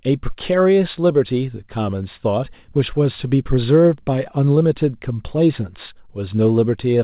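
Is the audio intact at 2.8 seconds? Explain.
Yes, the speech at 2.8 seconds is intact, passing through the call path as normal, with the telephone-style band limit that leaves nothing above 4 kHz.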